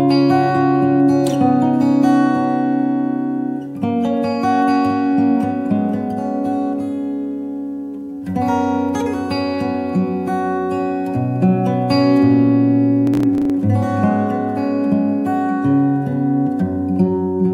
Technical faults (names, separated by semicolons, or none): processor overload crackle